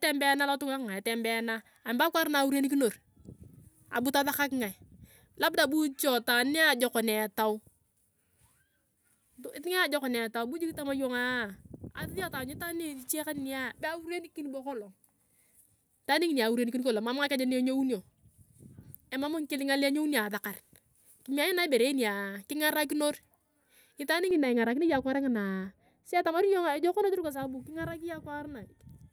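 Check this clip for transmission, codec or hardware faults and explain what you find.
One fault is present. From 24.31 s to the end at 29.12 s, de-emphasis is applied wrongly. A treble cut meant to reverse pre-emphasis hits audio that never had any, or is applied a second time. Response slopes smoothly downward, about 11 dB lower at 10 kHz than 1 kHz. The speech sounds dull and muffled.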